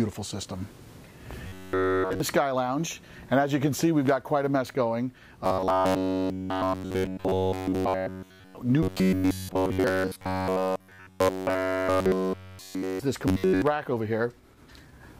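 Robotic sound from repeated short buffers hits at 1.48–2.20, 5.45–8.57, 8.83–13.00 and 13.28–13.62 s: a rigid 94 Hz buzz, likely from one roughly 10.7 ms chunk looping nearly nonstop.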